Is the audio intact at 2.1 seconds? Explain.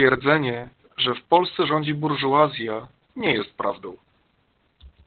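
No. At 2.1 seconds the speech sounds muffled, hoarse and faintly robotic, and that holds for the whole clip rather than being a local glitch. The cause is Opus voice compression running in its SILK speech mode: the band is squeezed to narrowband, cutting everything above about 4 kHz, and the excitation is coded very coarsely, which fits a bitrate around 8 kbps. The codec damage here is heavy.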